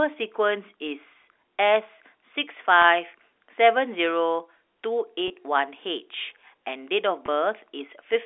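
Packet loss with pitch repetition at 2.82–2.84, 5.28–5.30 and 7.26–7.28 s: each 20 ms gap, consistent with one lost packet, is filled by repeating the last pitch period, heard as a brief buzzy hold.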